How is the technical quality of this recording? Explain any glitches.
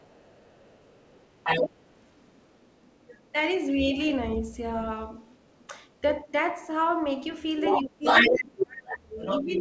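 The recording has clear echo and double-talk problems, worst in the last two seconds.

Other side's voice leaking through, from 0.0 to 3.33 s and 5.2 to 6.01 s at about 30 dB under the talker, then from 7.64 s to the end slightly louder than the talker. The likely cause is residual echo the canceller missed, showing on a spectrogram as a second harmonic pattern.

Speech suppressed in double talk, first as a brief dip of about 10 dB near 6.24 to 6.32 s, then from 7.81 s to the end with drops near 30 dB. This is likely the canceller ducking everything while both sides talk, visible as gouged, ragged waveform envelopes. Throughout, the spectrogram stops sharply at 8 kHz, which fits a G.722 wideband call path.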